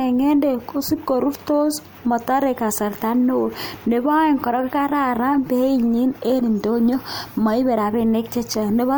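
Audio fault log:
Nothing to log here, as no faults turned up anywhere in this speech recording.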